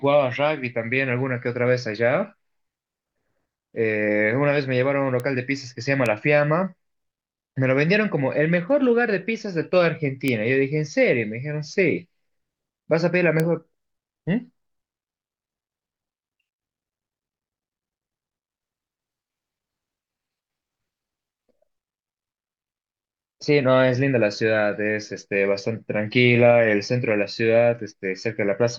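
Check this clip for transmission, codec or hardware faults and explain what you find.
Four bit error spikes occur in this speech, at 5.20, 6.06, 10.28 and 13.40 s. Each is a single flipped bit in a sample value, possibly a few adjacent samples at 6.06 s, so the waveform jumps by a power of two and snaps straight back. They peak at about -10 dBFS for the first two and about -4 dBFS for the last two. Each is heard as one sharp, broadband tick that has no relation to the speech around it.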